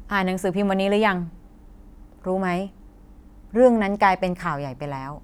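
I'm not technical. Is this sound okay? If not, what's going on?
Yes, nothing's wrong with this recording; there are no dropouts, glitches or other technical problems to hear anywhere in it.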